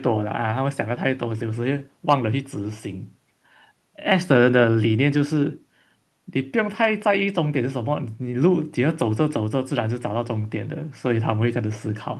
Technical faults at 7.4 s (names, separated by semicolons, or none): none